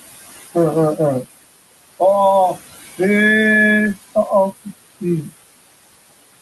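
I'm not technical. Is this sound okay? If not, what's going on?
No, not quite. All the way through this speech recording you can hear noise suppressor artifacts. A cleanup filter keeps trying to strip out the steady noise of the room, cutting it down hard whenever nobody's talking, then letting it creep back up under the voice. So the background pumps in and out. The room noise itself is just part of the recording.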